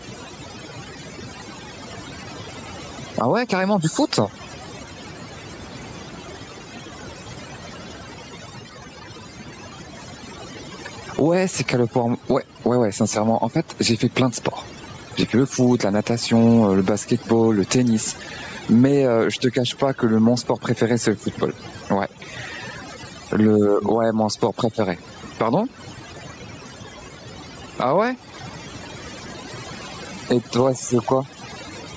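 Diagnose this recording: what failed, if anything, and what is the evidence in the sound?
Overdone noise removal at the call-processing stage runs throughout. Bands near the noise estimate get cut, so the background drops and breaks up into twinkling specks, and quiet parts of the voice are cut away with it.

Gain pumping also runs throughout, at the input gain stage. The gain is pulled down roughly 10 dB on loud sounds, squashing loud and soft parts closer together. The likely cause is excessive mic gain hitting a fast limiter.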